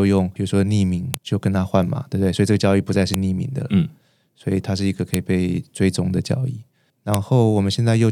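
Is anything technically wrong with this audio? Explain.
Yes. This speech clip has one kind of fault, a file header played as audio, and it recurs four times. The audio appears to have been assembled from 2-second WAV pieces joined without stripping each piece's header, so those few dozen bytes of metadata are decoded as sample values. Each junction produces a sharp, loud click or snap, regardless of what the speech is doing, at 1.14, 3.14, 5.14 and 7.14 seconds.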